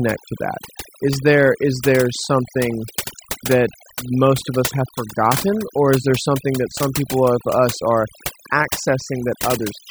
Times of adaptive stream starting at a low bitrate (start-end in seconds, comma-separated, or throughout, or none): none